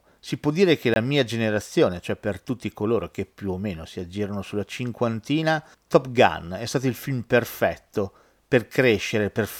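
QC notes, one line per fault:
0.94 to 0.96 s, block of digital silence: a 20 ms stretch of the speech drops to silence and returns with no fade, so it reads as a short hole, likely from the output buffer not being filled in time.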